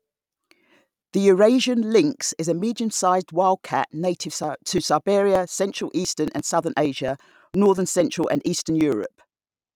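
From 4.32 s, just after "wild cat native", to 9.62 s, periodic USB or driver dropouts skip around 10 ms of speech every 0.115 s, about fifty times. Their strictly even spacing, ticking only while sound is present, separates them from random network dropouts.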